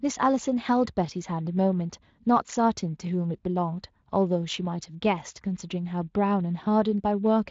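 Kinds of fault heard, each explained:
Nothing here stands out as a fault, so there's nothing to list for this one.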